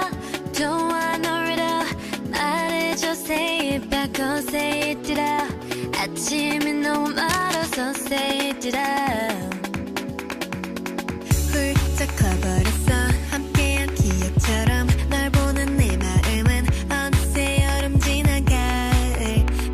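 From 7.29 to 7.76 s there is cable scratch noise, likely from a worn cable, connector or control carrying DC being moved, so its contact resistance jumps about. That adds dense, uneven bursts of noise, roughly 10 dB below the signal, heard as scratching or rustling over the sound.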